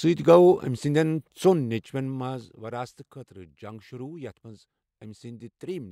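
No technical faults can be heard anywhere in this speech recording; the signal stays intact throughout.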